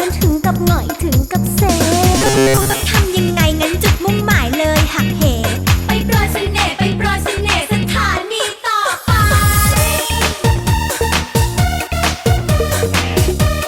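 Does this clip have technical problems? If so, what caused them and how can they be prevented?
Yes. From 2.18 to 2.80 s there is robotic sound from repeated short buffers, a rigid metallic buzz at 134 Hz. The likely cause is data arriving too slowly, so the player loops a roughly 7.5 ms chunk and skips most of the real audio. A spectrogram shows even horizontal lines at multiples of 134 Hz, and the waveform shows identical repeating cycles. A larger playback buffer and a steadier data supply would prevent it.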